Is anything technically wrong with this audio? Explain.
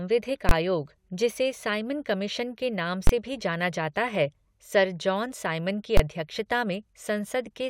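Yes. Three loud bangs cut through the speech at 0.49–0.51 s, 3.07–3.09 s (between "साइमन कमीशन के नाम" and "से भी"), and 5.97–6.00 s. These are invalid numbers at full scale: infinite or invalid values were clamped to maximum for each 21 ms block, which fits a 1024-sample block.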